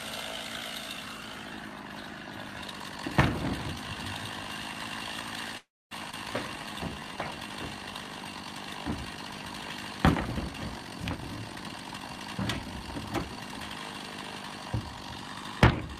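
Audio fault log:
5.57–5.93 s, call audio freeze: sound stalls for about 0.34 s, mostly silent, then resumes where it stopped with nothing lost, likely because delayed packets emptied the jitter buffer.
6.11–6.14 s, skip ahead: playback jumps forward, dropping roughly 0.2 s of audio, with the two sides joined almost directly, as a stretch was discarded while later audio waited.
6.43–7.48 s, jitter buffer slow-down: audio runs at 85% speed at unchanged pitch, as repeated pitch periods or pause fragments add 171 ms to rebuild the buffer's reserve.
11.11–13.52 s, jitter buffer speed-up: audio runs at 113% speed at unchanged pitch and sounds hurried, as short pitch-period pieces totalling roughly 0.3 s are cut to reduce delay.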